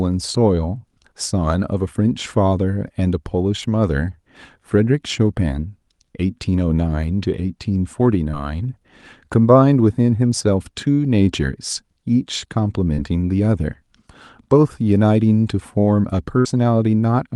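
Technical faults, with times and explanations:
8.31–8.35 s and 12.95–12.99 s, short concealed packet loss: about 20 ms of audio failed to arrive in time at each point, and the receiver bridged it with 13 ms and then 27 ms of extrapolated sound before blending back, leaving a brief smear or wobble.
16.39–16.47 s, burst of packet loss: about 60 ms went missing in a row. The receiver extended the preceding sound for about 53 ms and faded it out, so a held buzz or dying hiss stands in for the lost segment before playback resumes.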